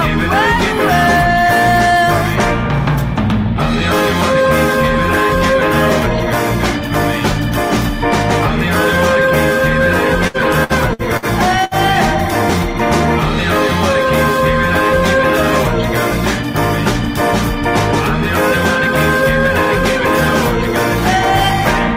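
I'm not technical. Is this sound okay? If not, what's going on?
No. From 10.27 to 11.25 s there is repeated packet loss (robotic sound): four short dropouts, each patched by stretching the previous sound, give a choppy stutter with pieces missing.

At 11.64 s a single burst of packet loss lasts about 0.1 s. Unlike the stutter, it is one held, fading smear, and then the audio jumps ahead.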